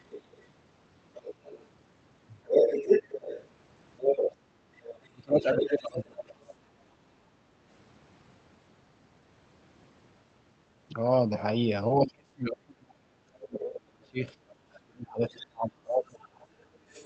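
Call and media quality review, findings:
Other side's voice leaking through, 0.1–6.55 s: far-end voice present in the send signal at roughly the same level as the near talker. Likely residual loudspeaker echo the canceller failed to subtract from the mic feed. Brief scrap at 13.58–13.63 s, about 15 dB under speech. Weaker trail 15.4 s to end of clip, about 25 dB down.

Speech suppressed in double talk, 5.0–6.52 s: near-end voice ducked by up to around 30 dB while both sides talk. Likely echo canceller unable to separate talker from echo, attenuating both. Worse at 11.96–16.33 s: roughly four seconds of affected speech, dips near 35 dB. Band-limited call sound throughout, top end stopping near 8 kHz, consistent with Opus wideband coding.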